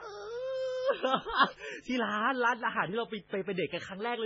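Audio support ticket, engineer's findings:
Steady raspy buzz under the speech for the full clip, roughly 35 dB below it. Mains buzz at 50 Hz: sharp switching spikes from a dimmer, rectifier or missing shield, twice per cycle, spreading harmonics up into kilohertz.

Watery, swirling speech with heavy damage, smeared attacks, metallic chirping on s sounds, nothing above 7.5 kHz, throughout. Likely MP3 compression at very low bitrate, fitting about 16 kbps: weak frequency lines dropped frame to frame, treble cut fixed.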